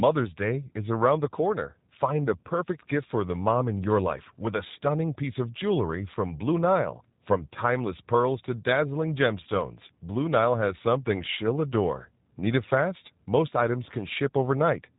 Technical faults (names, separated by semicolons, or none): G.729 codec